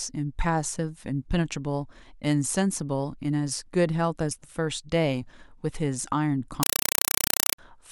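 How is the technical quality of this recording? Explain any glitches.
The recording has one serious glitch near the end. From 6.63 to 7.58 s the speech is replaced by very loud, harsh chattering static, a rapid rattle of noise bursts about 4 ms long repeating 31.25 times a second. This is a compressed stream played as audio. A Dolby Digital (AC-3) bitstream, consistent with a 192 kbps stream, was passed along the digital link as if it were ordinary samples instead of being decoded. Each compressed frame comes out as a burst of noise followed by silent padding.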